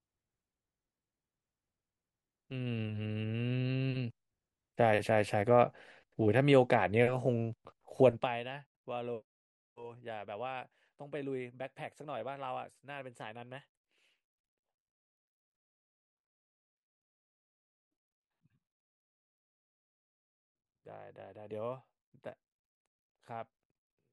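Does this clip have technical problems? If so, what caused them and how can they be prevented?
Yes. Zipper noise runs from 8.09 to 8.45 s, where the speech level drops by about 15 dB in a rapid series of small unsmoothed steps, around 300 a second, each leaving a tiny click that together form a buzzy ticking. Interpolating gain changes sample by sample, rather than stepping them, prevents it.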